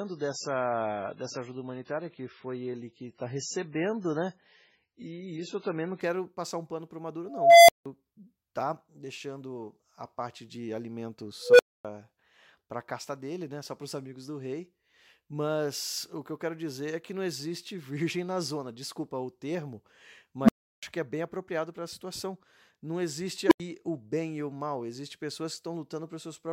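A speech clip with two kinds of fault. For the first 6.0 s it plays as an adaptive stream starting at a low bitrate. Nothing is heard above 7.6 kHz, and codec artefacts are strong. The dullness points to roughly 16 kbit/s MP3. Quality then jumps suddenly, with no gap, just before "passar um pano para", which fits a step up to around 128 kbit/s once the player had measured the connection. An unstable filter strikes four times. A recursive filter with bad coefficients lets a tone swell, clip, overflow and drop to silence until it resets. The first comes at 7.27 to 7.86 s, a tone near 700 Hz building over 0.42 s, then 0.17 s of silence. The second is at 11.43 to 11.85 s, near 500 Hz, with a 0.16 s build and 0.26 s of silence. The third, at 20.43 to 20.83 s, is near 200 Hz, with a 0.06 s build and 0.34 s of silence before "que é bem apropriado". The last, at 23.47 to 23.60 s, is near 300 Hz, with a 0.04 s build and 0.09 s of silence before "o bem e o".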